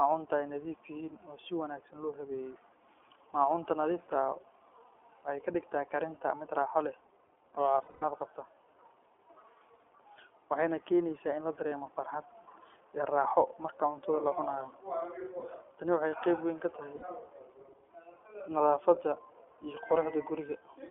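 The whole speech clip runs through the iLBC codec. Everything above about 3.4 kHz is gone, and the voice has a rough, slightly synthetic edge, which fits the 15.2 kbps, 20 ms frame mode.

There are lost iLBC frames at 7.78–8.04 s, 11.68–11.74 s, 15.40–15.45 s and 16.96–17.05 s. The decoder fills each gap by repeating the last pitch cycle with noise, so you hear a brief buzzy, held vowel. The first gap is the longest, with patchy fill over a quarter second, and the voice snaps back immediately after each one.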